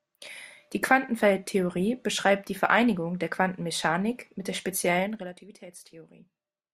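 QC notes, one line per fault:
4.98–5.38 s zipper noise: a level drop of roughly 15 dB is applied in unsmoothed 2 dB steps, about 30 per second, so each step clicks and the speech ticks audibly as it fades.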